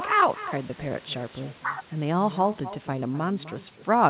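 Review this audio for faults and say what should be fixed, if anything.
Echo with no canceller runs through the whole speech. A thinner copy trails every phrase by about a third of a second, roughly 14 dB quieter. The far end's loudspeaker feeds its microphone unchecked. Enable acoustic echo cancellation at the far end, or have that listener use headphones.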